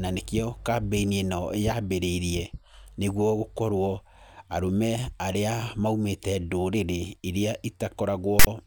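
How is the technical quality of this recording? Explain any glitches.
The speech recording is marred by one glitch near the very end. From 8.39 to 8.47 s there is a case of file tags played as audio. A block of metadata sits inside the stream, and the player reads its bytes as samples. This block holds text followed by zero padding. The text bytes give a loud, harsh rasp pushed off to one side. The padding then drops to silence. The burst starts and stops with hard edges.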